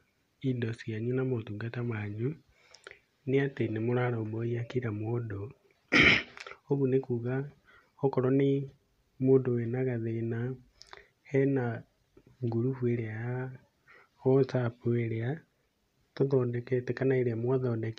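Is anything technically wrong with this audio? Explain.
No, nothing technically wrong can be heard anywhere in this speech recording.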